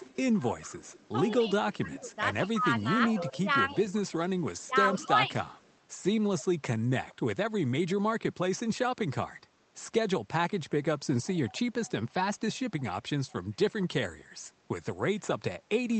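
From 0.0 to 1.34 s an echo leak is audible: a faint copy of the speech trails the original by 165 ms, about 20 dB down. The likely cause is a far-end loudspeaker whose echo canceller let part of the returning signal through. It differs from room reverberation because the copy is a distinct, fixed-delay repeat and not a smooth decay.

Between 1.45 and 3.76 s the speech is suppressed in double talk. Both sides are talking, and the level dips by up to roughly 15 dB across about a second in total. The likely cause is the echo canceller mistaking the talker for echo. This is the opposite of a leak: wanted speech is removed, and nothing extra is added.

The echo leak returns from 3.88 to 6.41 s at about 30 dB down. Within it, from 4.39 to 5.32 s, double-talk suppression again clips the speech for roughly half a second. Further brief leaks with the same 165 ms delay occur at 7.09 to 7.15 s (about 30 dB down), 11.25 to 11.9 s (about 25 dB down) and 12.79 to 13.84 s (about 30 dB down). 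Through the codec the echoes keep the same 8 kHz upper limit as the speech.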